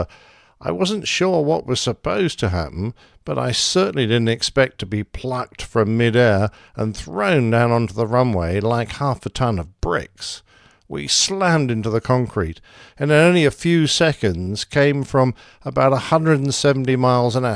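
No technical faults turn up anywhere in the recording; nothing in it calls for attention.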